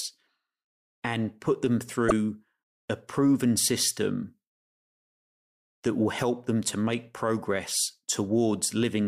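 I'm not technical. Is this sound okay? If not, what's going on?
No. Broken MP3 bit reservoir at 2.08 to 2.12 s, just after "and put them": a brief glitch, likely because lost file pieces left the following audio reading the wrong data.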